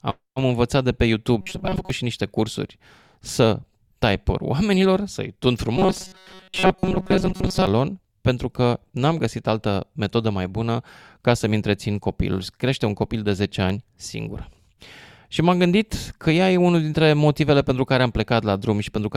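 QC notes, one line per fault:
1.41–1.90 s, robotic sound from repeated short buffers: after "învățat de pe", speech turns into a rigid metallic buzz at 188 Hz until "și niște cursuri să", likely from starved playback looping a roughly 5 ms chunk over most of the span. The spectrogram shows flat evenly spaced harmonics, and the waveform shows identical repeating cycles.
5.77–7.67 s, robotic sound from repeated short buffers: the same 188 Hz buzz lasts almost two seconds before "pentru că", likely from most of the audio being replaced by a looped buffer of about 5 ms. The spectrogram shows a rigid harmonic comb instead of moving formants, and the waveform shows periodic copies.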